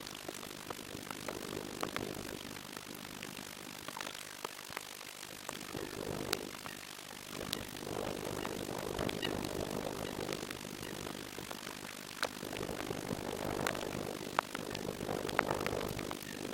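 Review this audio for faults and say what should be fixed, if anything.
Overlap-add ripple runs throughout: mismatched window overlap makes the level dip about 60 dB once per frame, a metallic buzz around 50 Hz. To prevent it, choose window and hop sizes that satisfy constant overlap-add.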